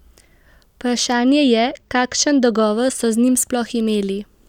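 From 1.13 to 2.62 s the speech turns dulled at the top. This is channel delay (comb filtering): one channel lags by only a couple of samples, and summing to mono cuts notches starting near 10 kHz.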